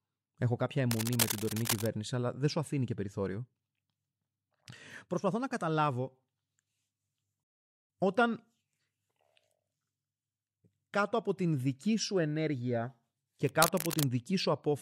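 A speech recording marred by two kinds of fault. Cable scratch noise appears from 0.91 to 1.89 s, just before "αλλά δεν σου αφήνει", and again from 13.44 to 14.10 s, right after "την δική σου ενέργεια". Each time, a rough, crackling rustle sits over the speech at only about 5 dB below it. The likely cause is a worn lead or connector being moved so that its contact resistance flickers. On a spectrogram these stretches show ragged, broadband vertical streaks scattered irregularly across the frequency range. In the waveform they appear as dense, uneven spiky bursts riding on the speech envelope. A playback stall cuts the sound from 7.43 to 7.90 s, silencing it mid-flow for about 0.46 s before it carries on. This likely happened because the player was starved of data or its audio thread was blocked. On the waveform it is a flat, near-silent line. On the spectrogram it is a clean, empty vertical band with hard edges on both sides.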